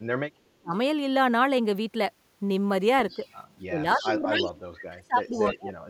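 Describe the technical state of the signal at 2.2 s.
At 2.2 s the speech signal is intact, with no audible fault at that moment.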